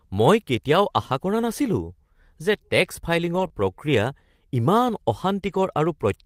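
From 3.35 to 3.45 s, a lost packet is rebuilt from error correction. About 60 ms of speech went missing. The decoder played the low-bitrate copies carried in the following packets, so there is no gap. Those frames sound rougher and noisier.

Just after, from 3.47 to 3.52 s, comes a short concealed packet loss. About 20 ms never arrived in time. The receiver extended the preceding sound to fill it, then blended back. It is heard as a brief smear or wobble.

From 5.46 to 5.60 s, error correction rebuilds lost packets again, covering about 80 ms. Once more there is no silence, only a stretch of grainier, noisier speech.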